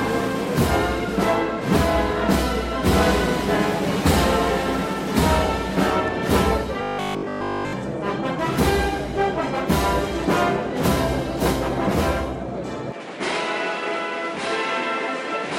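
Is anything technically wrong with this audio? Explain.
Yes. From 6.83 to 7.73 s the sound becomes a rigid, metallic 50 Hz buzz, robotic sound from repeated short buffers, likely one 20 ms chunk looped while real audio was skipped.

From 12.92 s to the end, the audio turns duller, a little quieter, and a faint new noise floor. The likely cause is the input switched to a poorer device, with no gap at the change.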